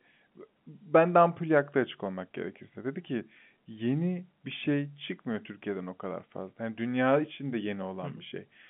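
There are no technical faults in this speech to describe in time order.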